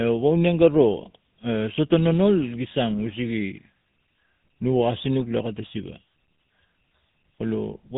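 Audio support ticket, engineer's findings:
GSM full-rate codec, throughout the full clip. Buzzy, gravelly roughness on all speech, plainly audible. Band hard-limited, nothing above 4 kHz. Component: narrowband cellular speech codec, sound consistent with a 13 kbps full-rate stream. Mechanism: vocal-tract model excited by regularly spaced pulses, excitation kept at one sample in three, so fine detail is replaced by a coarse pulse train.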